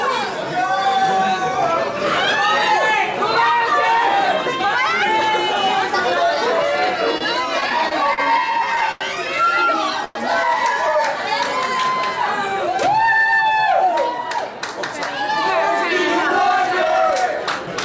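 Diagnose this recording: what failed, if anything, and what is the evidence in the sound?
Repeated stalls (stutter) between 7.18 and 9.03 s, at the network and jitter-buffer stage. The sound hitches nine times, each stall stretched by continuing the last sound rather than leaving a hole. The longest lasts 91 ms, and about 226 ms of filler accounts for 12% of the span. Nothing is lost. Packets kept arriving slower than playout, so the buffer drained again and again and the receiver padded each wait.

Call audio freeze at 10.05 to 10.17 s, in the same network and jitter-buffer stage. For 106 ms the last sound is held and continued as a fading fill, with no drop to silence. Then the audio resumes where it stopped, so the timeline gains a 106 ms insertion without missing material. This is likely a single late burst of packets that emptied the jitter buffer, with concealment covering the wait until delivery caught up.

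Jitter buffer speed-up at 14.40 to 15.31 s and again at 16.42 to 17.75 s. The audio runs at 103% speed with its pitch unchanged, and roughly 40 ms is trimmed in each stretch. The buffer held more audio than its target. The receiver shed the excess by cutting short pitch-period-sized pieces in quick succession. All of this rides on the G.722 call path at 64 kbps, where nothing reaches above 8 kHz.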